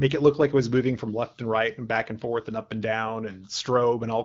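At no point in the speech does a technical fault occur, and the audio comes through the AMR wideband (HD Voice) codec at 12.65 kbit/s.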